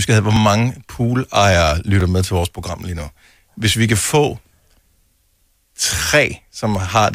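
At 0.36 s the speech jumps forward by a few milliseconds with no gap of silence, and at 2.01 s a similar jump carries a larger skip of around 10 ms. Both point to a dropped buffer (overrun): the likely cause is that the capture software fell behind and the hardware overwrote a block of samples before it was read, so the audio on either side of the missing block is butted together.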